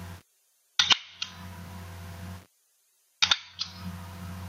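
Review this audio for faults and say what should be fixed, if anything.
Gain pumping runs through the whole clip. The swing is large, about 20 dB. Loud and soft moments sit unnaturally close in level, and everything feels squashed. The likely cause is input gain set far too high, with a fast limiter or compressor clamping down on each peak and releasing between them. Lower the input gain and ease off the limiter so peaks no longer trigger heavy gain reduction.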